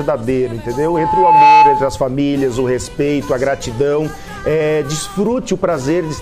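The audio carries a loudspeaker feedback squeal from 0.64 s to 2.07 s: a single tone at 865 Hz swells out of the sound over roughly three quarters of a second and settles around 10 dB above everything else. A microphone is hearing its own loudspeaker, and at that frequency the loop gain has passed one, so the tone feeds itself. What separates it from an added tone or hum is that gradual self-amplifying rise at one pitch.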